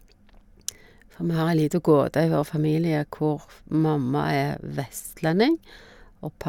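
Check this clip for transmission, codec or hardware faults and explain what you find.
No fault can be heard anywhere in this speech recording. There is nothing to point to at any moment of it.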